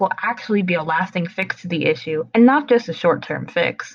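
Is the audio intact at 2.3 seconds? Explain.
Yes, at 2.3 seconds the speech is intact, with no audible fault at that moment.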